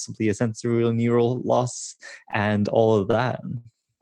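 Five brief hitches interrupt the speech, each a sound held slightly too long with a slight buzz or dip: at 1.35 s after "a sensory", at 1.95 s, at 2.31 s just before "and all of", at 3.11 s, and longest at 3.57 s after "loss and all of". These are short stalls from a late packet. The jitter buffer ran dry, so the receiver stretched the last sound by 16, 37, 21, 26 and 76 ms before resuming, with nothing lost.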